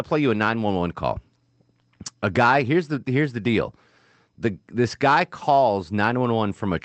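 Nothing here counts as a fault: the speech has simply come through a call path, where the Opus codec's top end stops at around 8 kHz and the coding texture fits a modest bitrate of about 20 kbps, both normal for a call.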